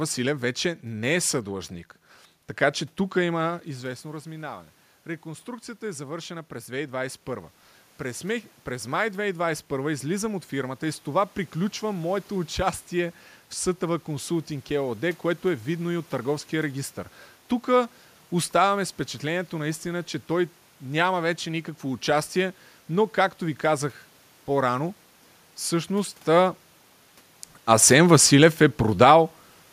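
Speech, with room noise behind it. The fault is automatic gain falling, from 26.29 s to 29.18 s. The gain control judged the input too loud, or its background noise too strong, and lowered its gain gradually, by about 4 dB in all. The voice and the room noise sink together. That sets it apart from the talker moving near 26 s and near 3.5 s, where only the voice level shifts.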